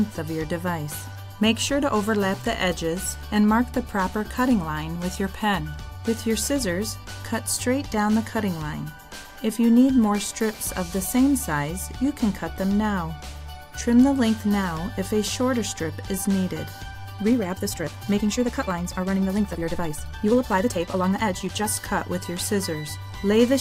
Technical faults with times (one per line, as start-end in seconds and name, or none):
17.15-21.69 time-stretched section